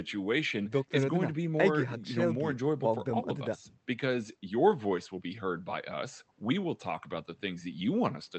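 Speech carried over a WebRTC call path, with the Opus codec's usual coding noise and its high end cut off around 8 kHz, and no faults to report.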